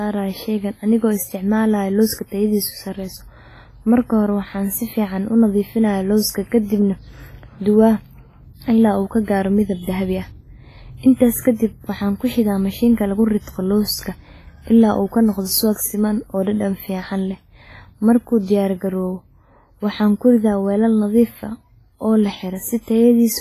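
Throughout the speech, heavy WMA compression is the likely cause of a washy, ringing sound whose hiss breathes with the voice, pointing to a low bitrate near 24 kbps. A spectrogram shows nothing above 15.3 kHz, with blurred, patchy gaps where weak detail was dropped.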